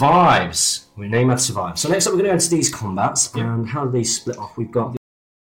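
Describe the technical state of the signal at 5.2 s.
At 5.2 s the signal is inside a cut-off end. From 4.97 s to the end of the clip, the final buffers were never written or played out. The sound stops mid-event at 4.97 s and falls straight to silence, with no natural decay.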